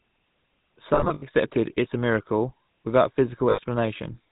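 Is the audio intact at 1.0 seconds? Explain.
No. From 0.94 to 1.23 s, just before "it as a miracle", the sound briefly freezes into a rough, metallic ring. These are lost GSM frames: about 200 ms of gaps across 280 ms, the longest run around 70 ms. The decoder filled each gap by repeating the last good frame. Under this, the buzzy, gravelly roughness and the loss of everything above 4 kHz come from the GSM full-rate codec, at a rate that fits 13 kbps, which rebuilds speech from a vocal-tract model driven by sparse pulses.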